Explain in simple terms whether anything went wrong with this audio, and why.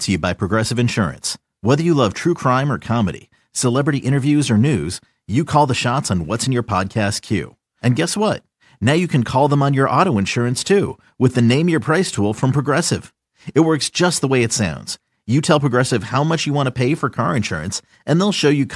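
Nothing went wrong; I hear no technical faults here.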